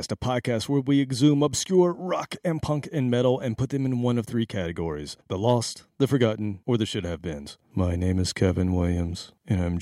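No faults are audible anywhere in this speech recording.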